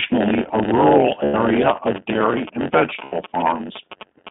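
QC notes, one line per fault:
Throughout: block size mismatch (padded). The speech carries a steady buzz at about 92 Hz and runs at roughly 0.92 times normal speed while holding its usual pitch. One stage writes blocks about 8% shorter than the next stage reads, so each block ends in a short stretch of zero padding. Those repeating silent slivers produce the buzz at the block rate and spread the audio out in time without shifting its pitch.
Throughout: iLBC codec. The audio is confined to a narrowband line of about 200 Hz to 3.6 kHz, and the coding damage is plainly audible as a slightly rough, synthetic texture on the speech. The sound fits iLBC's 15.2 kbps mode with 20 ms frames. In that mode each frame's excitation is coded independently of the previous frame, which keeps the speech intelligible but removes the upper band and leaves a coarse, vocoded edge.
1.24–1.35 s and 3.04–3.14 s: lost iLBC frames. 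The first gap lasts 100 ms and falls just after "a rural". The second lasts 80 ms. Each gap sounds like a briefly held, faintly buzzy, breathy vowel, consistent with five and four lost 20 ms frames. The decoder fills missing packets by repeating the last pitch cycle mixed with noise. Because iLBC frames do not depend on earlier ones, the speech snaps back cleanly as soon as good packets resume.
1.71–4.29 s: GSM signalling bursts. A galloping dit-dit-dit pattern of short buzzes at about 217 Hz sits around 15 dB below the speech until near the end. A nearby 2G phone is transmitting short groups of signalling bursts, and the audio circuitry rectifies the RF envelope. The result is audible interference at the TDMA burst rate, grouped into the characteristic irregular clusters.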